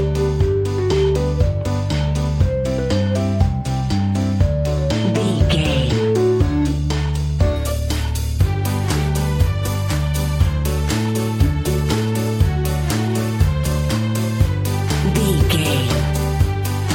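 Channel delay (comb filtering) runs from the start to 7.56 s. One channel arrives a tiny fraction of a millisecond behind the other, which fits an offset of a couple of samples, and when the two are summed to mono, content common to both cancels at regularly spaced frequencies. With so short a delay, the first notch falls near 10 kHz, so the top end sounds dulled rather than hollow.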